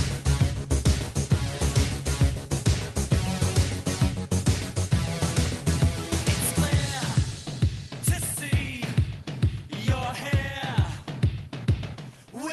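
No technical faults are audible.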